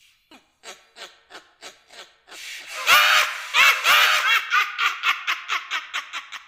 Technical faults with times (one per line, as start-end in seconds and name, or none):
1.63-4.41 doubled audio track